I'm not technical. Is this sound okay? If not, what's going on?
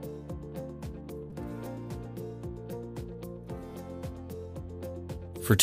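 No. At 1.30 s there is a repeated buffer: fresh audio arrived late, so the playback device replayed its last tiny chunk three extra times. The chunk is very short, which fits a buffer of about 5 ms, so it sounds like a brief click or buzz.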